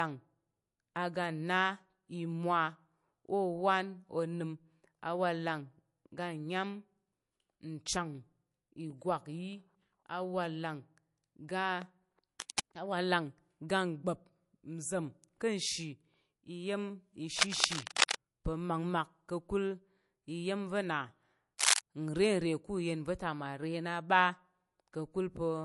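From the start the speech has a dull, swirly top with nothing above 11.3 kHz. That points to low-bitrate audio saved at a high bitrate, likely a 48 kbit/s MP3 re-encoded at 192 kbit/s, so the bigger file keeps the first pass's losses.

Cable scratch noise shows up three times: 12.40 to 12.60 s, 17.38 to 18.16 s, and 21.58 to 21.81 s. It's rough, uneven rustling, a bit under the speech at first, then level with it, then louder, likely from a worn connector being moved.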